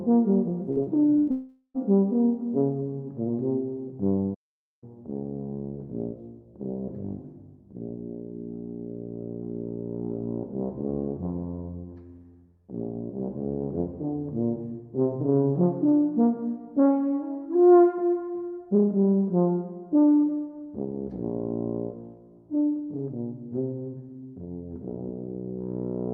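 Packets went missing in two bursts of packet loss, at 0.71 to 0.80 s and again at 1.18 to 1.30 s, about 40 ms and then about 80 ms of audio. Each time the receiver carried the last sound forward and let it sag, for roughly 50 ms and then nearly 90 ms, so the audio turns into a short held buzz or fading hiss before jumping ahead past the part that never arrived. Between those bursts, a short concealed packet loss at 0.83 to 0.89 s left a hole of about 40 ms that the decoder patched with about 34 ms of extrapolated sound, heard as a brief smear or wobble before it blends back into the real audio. Directly after the second burst, from 1.31 to 1.77 s, the sound points to a long network dropout as the likely cause: about 440 ms of audio failed to arrive, and the receiver stretched the last sound across roughly 430 ms, so it decays as a dwindling buzz or hiss into about 60 ms of silence before the audio resumes further on with that stretch gone. 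Later, at 4.34 to 4.84 s, the output simply stops for about 480 ms, a gap with no synthetic tail, no buzz and no hiss. That clean cut-off suggests a playback stall as the likely cause: the player ran dry or its thread was held up, so the output fell silent mid-flow until it recovered and carried on.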